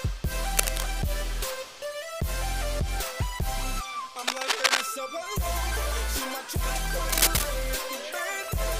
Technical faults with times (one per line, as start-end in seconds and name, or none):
0.57-0.87 cable scratch noise
4.27-4.83 cable scratch noise
7.09-7.43 cable scratch noise